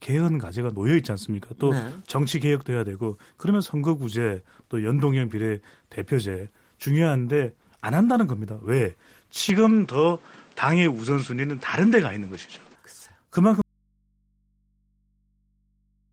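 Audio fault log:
9.49 to 12.76 s, input switched to a poorer device: the speech suddenly loses its top end, with nothing above about 8.6 kHz, and a new layer of background noise sits roughly 30 dB under it. There's no gap at the changeover and the level barely moves, so it's the dulled, boxier tone and the fresh noise floor that give it away. That fits the input likely flipping to a lesser mic or a headset profile, then back.
13.62 s to the end, audio dropout to a faint residue: the speech cuts off abruptly and never returns, leaving only mains hum around 45 dB below the earlier signal level. It's a hard stop, not a fade or a natural pause, and the hum means the path downstream stayed open after the wanted signal vanished, most likely a lost source feeding into a still-live input.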